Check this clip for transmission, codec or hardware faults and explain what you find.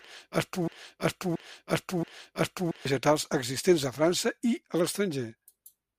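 A broken-record loop runs from the start to 2.85 s, already under way when the clip opens. The stream likely stalled and kept resending its last 0.68 s fragment, which repeats exactly three times, back to back, before normal speech resumes at "existents a".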